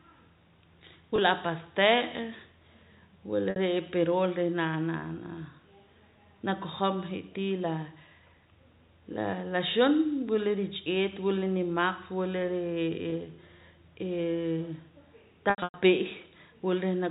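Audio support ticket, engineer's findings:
Packet loss with pitch repetition at 1.16–1.18 s, 3.50–3.56 s, 13.10–13.12 s and 15.50–15.74 s. The receiver loops the last pitch cycle across each gap, giving a brief held buzz at 20 ms drops. The 60 ms gap fades further before recovery. The last stretch loses about 200 ms scattered over 240 ms, the longest hole about 100 ms, which fits several consecutive 20 ms packets going missing. The path is G.711 mu-law telephone band, nothing above 4 kHz.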